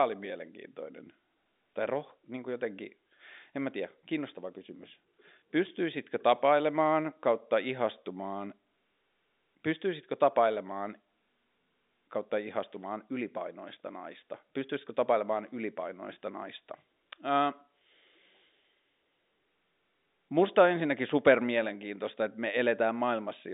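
No technical faults can be heard anywhere in the speech. What comes across is the narrow band of an ordinary G.711 telephone line, from about 200 Hz up to 3.7 kHz, with nothing at all above 3.8 kHz.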